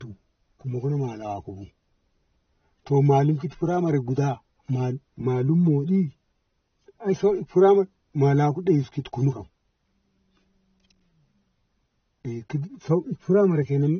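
Throughout the speech, nothing is present above 6.3 kHz, so it sounds dull and band-limited. This is likely low-bitrate audio saved at a high bitrate: the loss points to a very low-rate AAC source, later re-encoded as high-rate MP3, which cannot restore what was removed.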